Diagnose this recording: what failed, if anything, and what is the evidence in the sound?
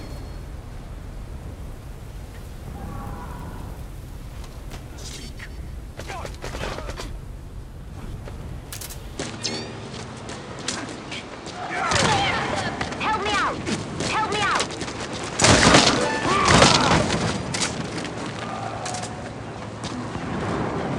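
At 9.18 s the capture side changes character: from there to the end nothing sits above 8.8 kHz, and a new noise floor shows up roughly 35 dB under the signal. There's no gap and no level jump, so the likely culprit is the input switched to a poorer device at the driver level.

There's a second problem in the codec or storage path. At 9.93 s the audio jumps forward by about a tenth of a second, which points to roughly five 24 ms frames being skipped.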